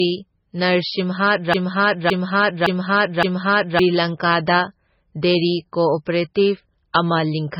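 Speech, heavily damaged by what is likely MP3 compression throughout. Nothing is left above about 5.5 kHz, so the sound is dull and boxed in. The damage is heavy. Weak frequency lines drop in and out between frames, giving a watery, swirling texture, and sibilants turn to metallic chirps. Sharp onsets smear. This level of loss fits a very low bitrate, around 16 kbps. From 1.54 s to 3.79 s there is a broken-record loop. A fragment about 0.56 s long plays four times back to back, each copy identical. The likely cause is a stall in the player or stream that kept resending the last fragment it held. Whatever should have been heard in those two and a quarter seconds is lost.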